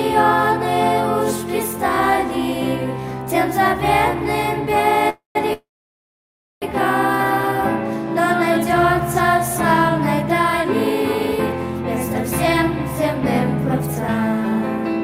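Call audio freezes at 5.09 to 5.37 s and 5.53 to 6.64 s: sound fades into silence, then resumes where it stopped, likely from delayed packets emptying the jitter buffer.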